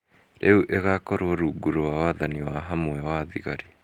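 Speech clip with one lost packet rebuilt from error correction at 2.37 to 2.39 s. There is no gap, but that 20 ms stretch sounds rougher and noisier because the decoder played a low-bitrate copy carried in the following packet, consistent with a single lost packet.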